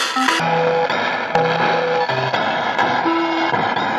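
From about 0.40 s right through to the end, you're hearing stereo read as mono. The left and right samples, which sit alternately in the stream, get pulled out one after another as if they were a single channel. That doubles the number of samples for the same stretch of sound, so everything plays at half speed and drops a full octave, 12 semitones down. It comes across slow and heavy, with a faint mirrored copy up in the top half of the spectrum.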